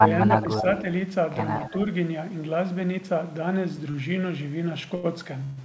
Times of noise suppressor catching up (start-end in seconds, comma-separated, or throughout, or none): none